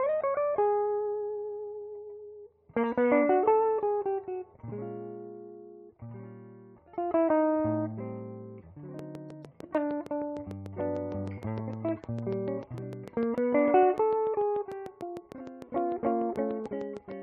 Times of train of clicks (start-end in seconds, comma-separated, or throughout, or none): 8.99-17.12